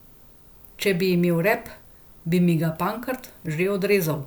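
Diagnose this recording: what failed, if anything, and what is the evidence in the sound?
Nothing in this speech recording gives me anything to diagnose; I can't hear any stage of the chain, from the wiring through to playback, calling attention to itself.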